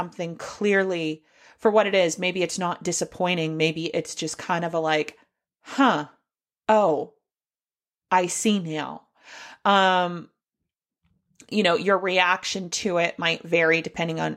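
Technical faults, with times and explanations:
Nothing technical stands out in this bit of speech; there's no fault here to point to.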